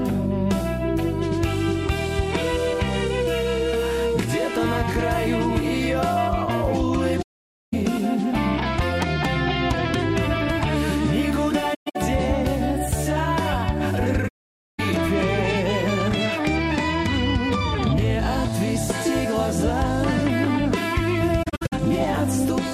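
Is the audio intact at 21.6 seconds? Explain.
No. Between 21.42 and 21.73 s there is AAC frame loss with muting: about 213 ms of audio is zeroed in separate holes, the longest around 70 ms, pointing to roughly ten lost frames. Overlapping windows fade each gap in and out, so the gaps sound soft-edged. On a spectrogram they appear as blank vertical bands, and the waveform shows smooth tapers down to silence.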